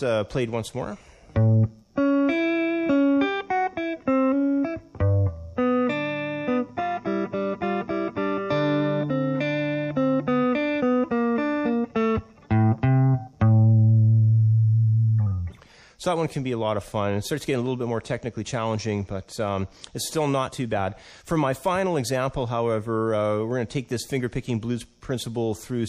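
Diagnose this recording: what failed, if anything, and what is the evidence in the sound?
Throughout the clip the treble is missing above a fixed cut-off, and the quieter high-frequency detail swirls and bubbles, with a watery, metallic edge on bright sounds and softened attacks. This is audible codec damage, most likely MP3 compression at a low bitrate, which fits about 64 kbps. On a spectrogram the top band ends in a hard horizontal shelf, and the region below it shows isolated blocks that flicker on and off from frame to frame.

At 20.47 s the sound jumps forward with a brief smeared blip rather than a sharp click. This is compressed frames skipped, a fault at the storage or decoding stage. Roughly 30 ms of audio is missing, about one frame's worth, which fits a single lost 26 ms MP3 frame. Because adjacent frames overlap, the join is blurred. The waveform shows a slightly discontinuous splice with no spike, and the spectrogram shows a narrow vertical smudge at that time.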